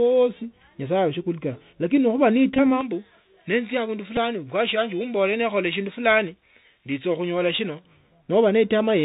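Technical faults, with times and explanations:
Throughout: Bluetooth CVSD headset codec. The audio is squeezed through the 64 kbps one-bit delta coder, so nothing above 4 kHz survives, a granular hiss sits under the speech, and sibilants turn scratchy where loud high sounds outrun the adapting step size. This is a dull, grainy band limit, not a brightening.
2.54–2.59 s and 4.16 s: Bluetooth headset packet repeated. At 2.54 s about 37.5 ms of audio is lost across 45 ms, with the longest run around 20 ms, so the same 3.75 ms chunk repeats and forms a brief buzz near 267 Hz. At 4.16 s an 11 ms run of three repeated packets gives a brief buzz. A pitched buzz, rather than a silent gap, marks these as repeats.
2.81–7.85 s: pre-emphasis left on. The treble boost from a shaping curve, which fits J.17, was never undone, so highs sit about 11 dB above 1 kHz at 10 kHz. The sound turns thin, bright and hissy. 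Unlike the codec's steady graininess, this brightness starts and stops at set points.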